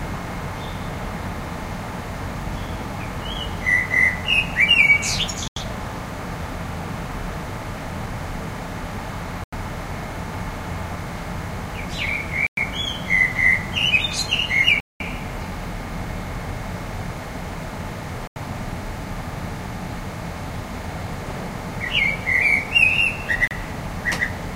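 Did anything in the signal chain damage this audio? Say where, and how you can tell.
Yes: a Bluetooth stall at playback. The sound drops to silence at 5.48, 9.44, 12.47, 14.80 (200 ms), 18.27 and 23.48 s, then resumes, likely because the headphone buffer emptied while delayed packets were resent.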